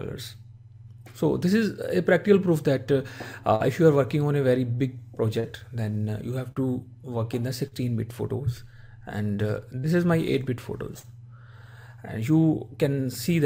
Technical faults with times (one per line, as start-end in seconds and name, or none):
3.55-3.63 short concealed packet loss
5.40-5.47 short concealed packet loss
6.52-6.59 short concealed packet loss
7.68-7.75 short concealed packet loss
9.80-9.86 short concealed packet loss
10.99-11.06 short concealed packet loss